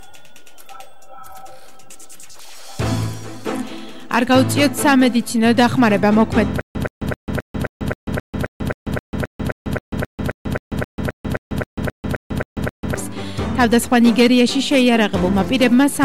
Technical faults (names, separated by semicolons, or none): stutter with silent gaps